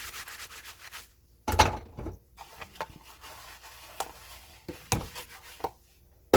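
From start to end the sound carries plainly audible Opus compression damage, likely from a low bitrate around 16 kbps in the music (CELT) mode. Content reaches up to roughly 20.2 kHz, so the bandwidth has not narrowed, yet tonal parts turn rough, grainy and noisy because starved bands are refilled with folded or noise-like energy. That texture separates it from MP3 artefacts, which swirl and warble through spectral holes instead.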